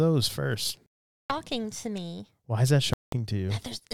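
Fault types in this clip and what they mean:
Bluetooth dropout: Audio packets likely failed to reach the headphones in time over the wireless link, so they were dropped and the output went silent until good packets arrived again. The speech cuts out twice: from 0.86 to 1.30 s, just before "to me", and from 2.94 to 3.13 s, right after "is that". Each time it resumes further along, as though it had kept playing through the silent stretch.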